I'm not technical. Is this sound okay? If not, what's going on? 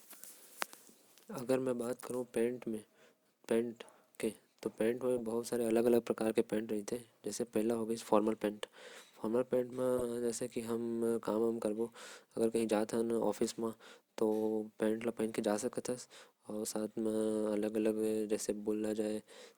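No. There are three brief glitches called corrupt frame decoded. Small pieces of the compressed speech were damaged, and the player played them anyway. That makes short chirps or blips, at 5.18 to 5.20 seconds, 9.98 to 10.02 seconds, and 16.55 seconds.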